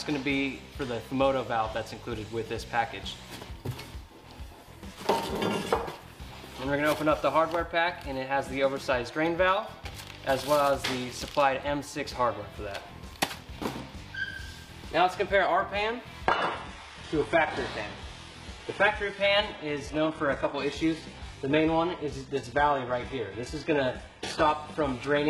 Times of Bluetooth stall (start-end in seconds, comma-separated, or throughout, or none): none